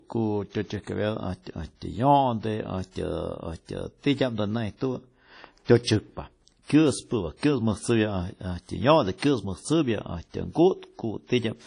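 Throughout the speech, the sound is ringing and washy, with hiss that swells and fades with the signal, likely from WMA compression at a rate around 32 kbps. On a spectrogram, nothing appears above 10.1 kHz, and weak partials show gaps where the encoder zeroed them.

From 5.65 to 5.69 s comes pre-echo. Quantisation noise sized for a sharp attack spreads back across the block, leaving a 39 ms hiss before the onset. The waveform shows a fuzzy build-up ahead of the transient, which sounds softened.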